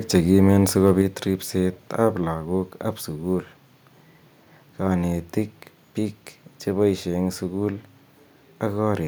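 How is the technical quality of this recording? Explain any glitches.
Two glitches sit close together near the start, just before "ribset ab lakok ab".

From 0.86 to 0.91 s a loud peak turns harsh and crackly, its tops flattened. This is likely microphone overload: the input was set high enough that the peak exceeded the converter's limit by about 1 dB, clipping a small fraction of samples.

At 1.02 s the speech and background drop together by about 4 dB in one step. The likely cause is the microphone volume being stepped down, as the call software reacted to that distorted peak by lowering the device's input level.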